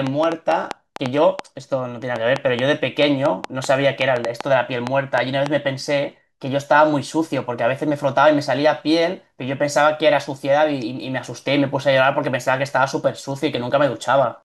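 A speech clip carrying a train of clicks from 0.07 to 5.47 s: about twenty similar pops at an uneven rate near 3.9 per second, peaking roughly 15 dB above the speech, likely from interference or a faulty connection. They appear as sharp waveform spikes and thin vertical broadband lines on a spectrogram.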